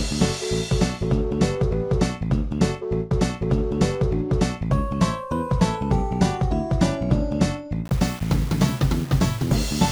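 Low bit depth without dither affects the sound from 7.85 s to the end at 9.91 s. Across that stretch the audio carries a distortion that moves with the signal. It lies roughly 20 dB below the sound. This is likely caused by rounding to very few levels, consistent with a 6-bit word, with no dither to break up the error.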